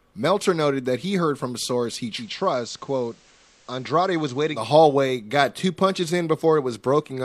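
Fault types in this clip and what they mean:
Digital radio blending to analogue: the receiver lost the digital stream and faded over 107 ms to the station's FM signal from 2.14 to 4.61 s, bringing hiss roughly 30 dB down and a level drop of about 4 dB.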